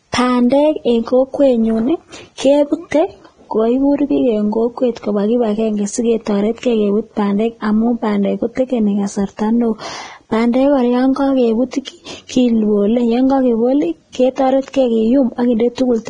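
It's a speech clip with heavy Vorbis compression damage all the way through: nothing above about 9.7 kHz, and the remaining treble is hissy and grainy, with blurred consonant attacks. That's likely a low-quality Vorbis encode, at a bitrate sounding near 20 kbps.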